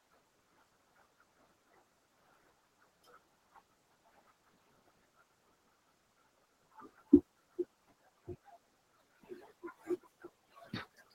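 Speech, with noise suppressor artifacts running throughout: the background sinks in the gaps and swells back under the talking, rather than staying steady like the room noise itself, which sits about 12 dB below the speech. On top of this is speech cut by the noise suppressor across the whole clip, from 0.0 to 11.15 s. Soft consonants and word endings are pulled down along with the noise, by about 22 dB at the deepest point, so they sound swallowed. A dropout or gate would cut everything abruptly instead.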